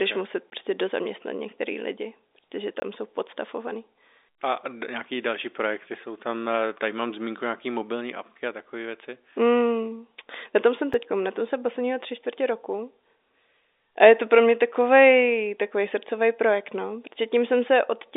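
Samples were replaced with zeros three times, leaving blocks of digital silence. The sound cuts to nothing and back with no fade. At 0.50 to 0.52 s, after "okay muset", and at 2.80 to 2.82 s, after "dozaměstnat některý lidi protože", 20 ms holes open. At 10.94 s, after "na tom jsem", a gap of about 4 ms sounds as a tick.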